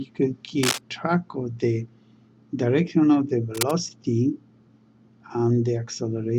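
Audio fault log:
0.63 to 0.78 s and 3.54 to 3.73 s: cable scratch noise, two short bursts of dense, ragged crackle over the sound. The first is roughly as loud as the audio, the second a little quieter. These most likely come from a worn connector or lead being moved, with its contact resistance jumping erratically.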